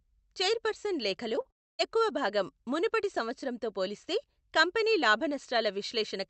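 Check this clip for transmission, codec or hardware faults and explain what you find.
Three transmission faults cluster just before "ఎక్కువ భాగం మునుపటి సంవత్సరంతో", in audio carried over an Opus call path whose top end stops at 8 kHz.

Short concealed packet loss occurs at 1.35–1.39 s and 1.41–1.47 s. About 20 ms and then 40 ms of audio failed to arrive, and the decoder extended the preceding sound to bridge each gap. The result is a brief smear or wobble rather than silence, and the sound resumes almost immediately.

A long network dropout, the likely cause of the break from 1.51 to 1.81 s, removes roughly 0.3 s. The concealment buzz fades quickly to near silence, and the audio returns with that stretch missing. The silent hole and the lost material set it apart from the short smears.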